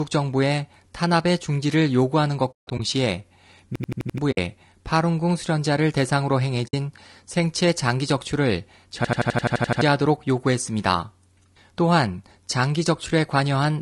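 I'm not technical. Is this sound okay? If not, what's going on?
No. Three separate problems can be heard.

The whole recording sounds rough and grainy, with a hiss sitting between the tones and a thin, artificial-sounding top end. This is low-delay AAC compression, the kind video-call apps use to send voice quickly. It likely comes from that compression working with too little data, so it chops the sound into very short slices and can't capture the voice's detail cleanly.

The sound also fades into brief, soft-edged silences. From 2.51 to 2.80 s several gaps cluster together, totalling about 200 ms, the longest roughly 150 ms. Shorter 60 ms holes follow at 4.31 s and 6.67 s. This is AAC frame loss with muting: chunks of data never arrived, and the player filled each one with silence while smoothly fading the sound out and back in.

There is also a rapid, machine-gun stutter. From 3.76 to 4.18 s, one tiny 85 ms snippet repeats 5 times, about 12 times per second. 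From 9.05 to 9.81 s the same thing happens 9 times over. This is a system hang loop: the computer briefly froze, and the sound hardware kept replaying the last bit of audio it held. Roughly 0.4 s and 0.7 s of real sound are lost at those two points.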